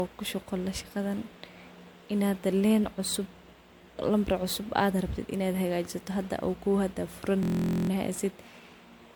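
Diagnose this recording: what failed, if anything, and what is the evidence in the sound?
The whole speech clip has a swirly, hollow, smeared quality, and consonant attacks are blurred. This is codec-stage damage, likely generation loss. The audio sounds as if it was decoded and re-encoded with MP3 at around 96 kbit/s, perhaps four times. Each pass quantises again on a shifted frame grid. Noise and spectral holes build up, so it sounds worse than one encode at that bitrate would. The top of the band stops near 19.9 kHz.

From 7.43 to 7.90 s, the sound turns into a steady buzz. This is a system hang loop at the driver or buffer stage. A 23.22 ms slice repeats exactly, about 20 times, at a rate of 43.1 Hz. That fits a 1024-sample buffer. The host or driver froze while the hardware kept replaying the same ring buffer segment. The loop is short, so it is heard as a pitched buzz, not a stutter. 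Little or no audio seems to be lost around it.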